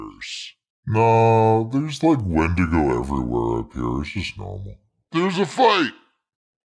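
Throughout, the speech runs at 0.689 times normal speed and sits about 6.5 semitones low. This wrong sample rate fits 32 kHz audio played back at 22 kHz.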